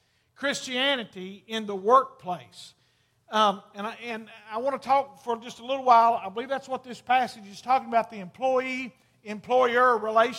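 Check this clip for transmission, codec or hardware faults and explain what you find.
I found no faults anywhere in the clip.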